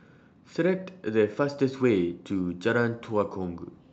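No technical faults occur in this speech clip; it comes through a WebRTC call path with an Opus codec running normally.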